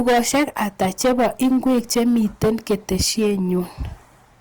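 Hard clipping runs through the whole speech clip: the signal reaches a gain stage driven about 15 dB past its limit, so roughly a tenth of all samples are sliced flat. Those squared-off peaks spray high harmonics, giving every louder syllable a harsh, buzzing fuzz.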